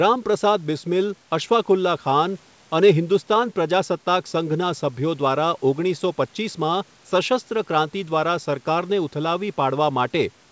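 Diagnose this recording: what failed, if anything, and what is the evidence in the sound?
Nothing failed; no fault is audible in the speech.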